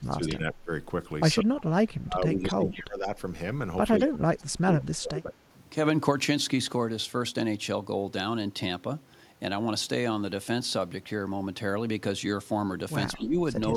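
Speech, where an echo canceller likely confused overlapping talk with loudspeaker echo and suppressed both, causing speech suppressed in double talk: the level dips by up to about 30 dB from 0 to 0.71 s, 1.42 to 3.08 s, 4.02 to 5.37 s, and more mildly from 13.16 to 13.39 s. The same canceller likely missed part of its microphone's loudspeaker pickup, producing echo leak: brief copies delayed by 183 ms at 2.73 and 13.16 s, about 20 and 30 dB below the speech.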